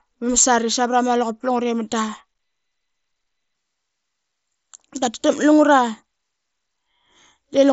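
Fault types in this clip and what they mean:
No faults heard.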